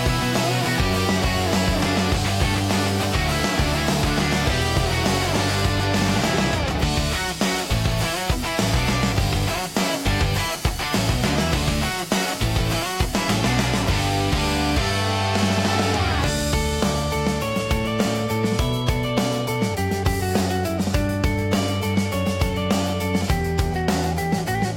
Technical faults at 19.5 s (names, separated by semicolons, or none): none